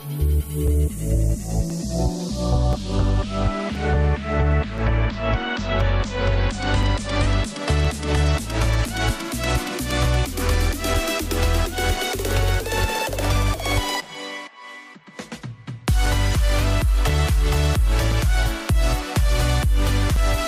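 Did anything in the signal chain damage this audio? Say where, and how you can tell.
Yes, periodic USB or driver dropouts at the driver/buffer stage: every 1.024 s from 0.68 to 20.17 s, a few milliseconds go silent, causing regular ticks.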